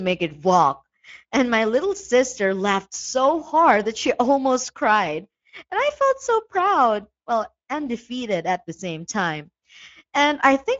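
From start to finish the speech carries Speex codec damage, and it is plainly audible. Speex is a CELP coder. It rebuilds speech from a filter model plus a coded excitation signal. Here the excitation is thinly coded, so voices sound noisy and hoarse. The damage points to a moderate setting, roughly what a 16.8 kbps stream would give. Nothing sits above 7.7 kHz, so the top of the band is gone.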